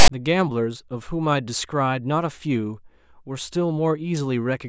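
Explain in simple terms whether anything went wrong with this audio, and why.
Right at the start, from 0 to about 0.09 s, there's a short, hard-edged rasp before the speech: file tags played as audio. The player treated the file's text labels as sound, giving a lopsided buzz, then blank padding that plays as silence.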